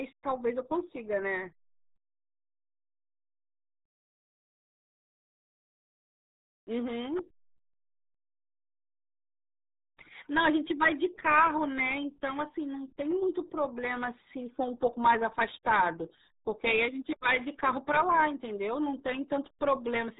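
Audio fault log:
throughout: RealAudio 14.4 codec. The speech sounds muffled and gargly, with nothing above 3.8 kHz. Such heavy damage fits an 8 kbit/s dial-up speech codec, which discards the upper band and coarsely rebuilds what remains.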